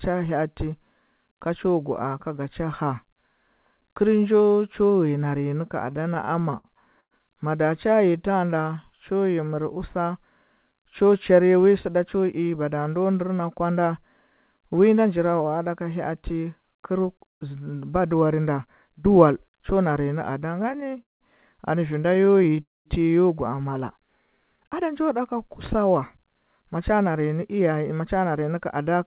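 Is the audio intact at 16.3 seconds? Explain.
Yes, the speech at 16.3 seconds is intact, carried through the call path with its usual narrowband character and nothing above about 4 kHz, and no fault occurs at that moment.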